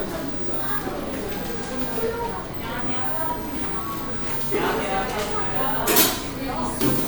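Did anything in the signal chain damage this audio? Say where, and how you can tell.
No, nothing along the signal chain audibly damages these everyday sounds, and the signal holds steady with no stage leaving a mark that a listener can hear.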